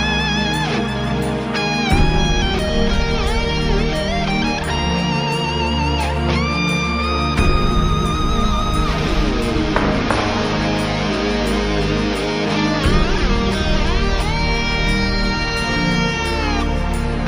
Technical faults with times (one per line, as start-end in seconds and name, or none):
7.53-9.28 mains buzz